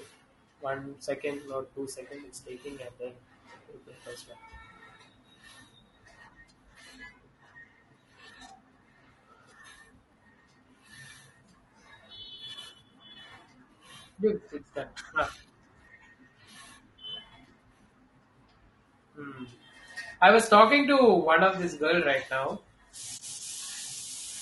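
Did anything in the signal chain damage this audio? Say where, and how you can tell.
Yes. Throughout the clip the speech sounds rough and grainy, with noise between the harmonics and a thin, synthetic-sounding top band. At the codec stage, the likely cause is low-delay AAC compression (AAC-ELD), whose short frames resolve pitch poorly at what sounds like about 32 kbps.

From 23.17 to 23.20 s the sound fades out into a brief, soft-edged gap and fades back in. This is AAC frame loss with muting in transmission: the decoder zeroed one lost frame's spectrum, which fits a 20 ms frame, and overlapping windows smoothed the edges.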